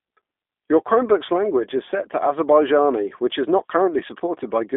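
Throughout, a G.729 codec rebuilds the speech from a filter and sparse pulses, limits it to 250 Hz to 3.6 kHz, and leaves it plainly rough and synthetic.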